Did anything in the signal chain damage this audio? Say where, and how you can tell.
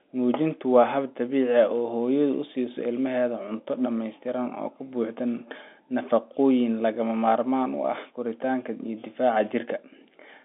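No, nothing in the signal chain damaged this audio.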